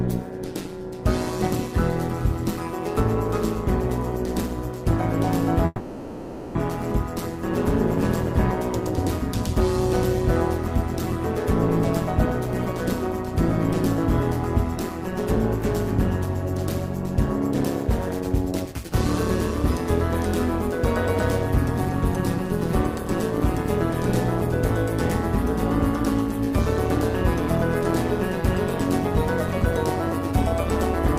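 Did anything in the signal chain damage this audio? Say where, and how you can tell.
Yes. Overlap-add ripple runs throughout: the level pulses by about 11 dB at around 150 Hz, a metallic buzz with extra tones around each note from frame-based processing whose windows don't sum to constant gain.

A call audio freeze at 5.66–6.57 s stretches the last sound into a fade for 0.89 s. The audio then resumes where it stopped, with nothing lost, likely from delayed network packets draining the jitter buffer.

A jitter buffer speed-up at 18.20–18.91 s plays the audio at 121% speed with unchanged pitch. The receiver trimmed about 150 ms of pitch-period pieces to shed excess buffered delay.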